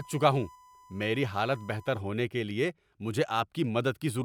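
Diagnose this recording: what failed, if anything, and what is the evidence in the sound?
USB whine sits under the speech from 0.0 to 2.0 s, a steady 1 kHz tone roughly 25 dB below the signal, clearing just before "ہونے کے لیے مجھے". This is an analogue wiring fault: the bus's 1 ms frame current leaks through shared power or ground into the audio path.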